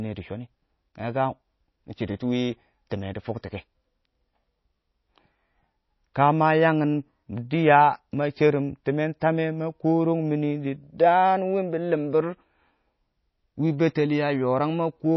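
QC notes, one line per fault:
Throughout, MP3 compression likely: plainly audible watery swirl and no content above 5.8 kHz, fitting a low bitrate near 24 kbps, where weak spectral lines drop out frame to frame.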